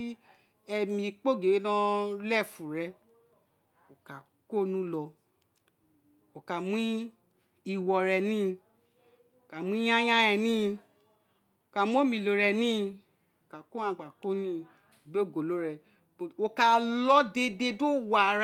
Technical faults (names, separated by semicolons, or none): none